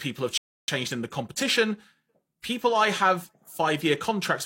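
A speech clip with one rebuffering stall: from 0.38 s to 0.68 s the sound drops to silence, then picks up exactly where it left off with "in the competition". The player ran out of downloaded audio and waited for more, so nothing is missing, but about 0.31 s of dead time is inserted.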